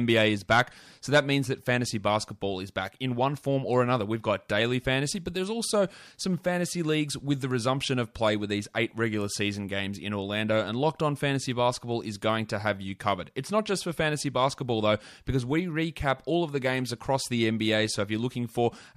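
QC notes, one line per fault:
Nothing stood out on listening to this speech recording.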